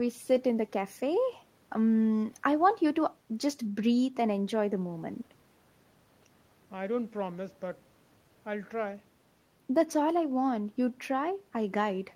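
No technical faults can be heard in the speech.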